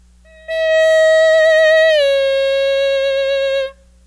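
Nothing technically wrong can be heard in this audio. No fault turns up at any point in the recording.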